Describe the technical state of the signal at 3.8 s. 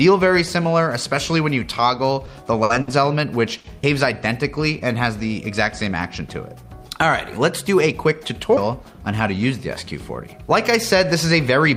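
At 3.83 s about a fifth of a second of sound is skipped, likely audio missing between chunks; unlike a dropout, no silence fills the gap, and the sides simply butt together.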